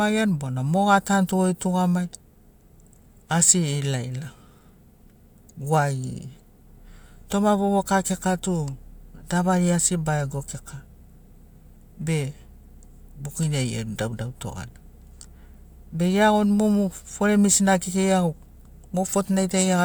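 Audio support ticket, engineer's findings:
Went through the speech recording and nothing turned up on my end, so there's nothing to chase here.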